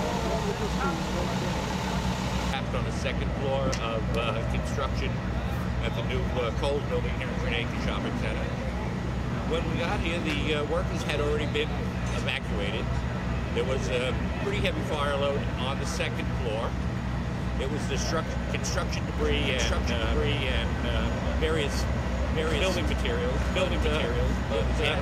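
From 19.18 s to the end, a doubled audio track: a copy about as loud trails a second behind, likely via a slower capture path.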